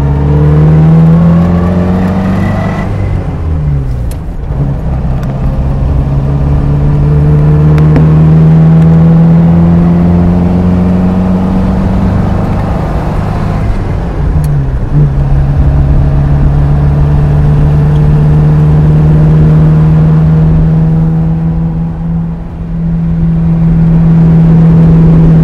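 Hard clipping runs from start to finish. The signal arrives at roughly 9 dB more level than the stage can hold, so every peak is sheared off flat, and around a tenth of the waveform sits pinned at the ceiling. Those squared tops throw harmonics high into the spectrum, giving a harsh, buzzing fuzz on each loud moment. Unlike gentle saturation, the grit appears abruptly at peaks while quieter passages stay clean.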